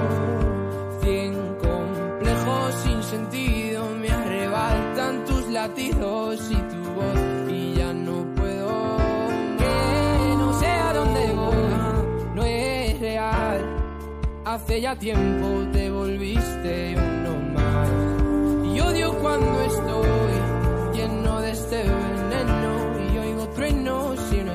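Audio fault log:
9.97 to 15.17 s, time-stretched section: The pace jumps abruptly to about 1.35 times normal speed, while the pitch stays where it was. The sound turns rushed. At 15.17 s the pace drops back just as suddenly. The likely cause is software squeezing this part to fit a shorter length. It dropped short slices to keep the pitch unchanged.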